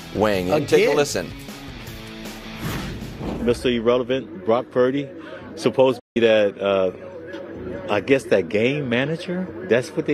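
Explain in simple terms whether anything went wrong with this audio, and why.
A digital broadcast dropout cuts the sound at 5.99 s, and it comes back at 6.17 s. The audio fades out in about 8 ms, leaving a gap of roughly 160 ms, which fits a handful of damaged frames. The receiver lost the digital signal or got frames that failed their error check, so it muted itself until good data arrived again. Whatever was broadcast during that gap never reached the listener and can't be recovered.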